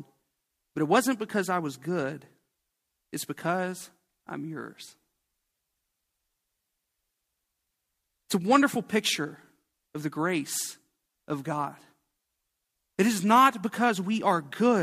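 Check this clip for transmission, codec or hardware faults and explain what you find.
No transmission, codec or hardware fault can be heard anywhere in the speech. There is nothing here to explain.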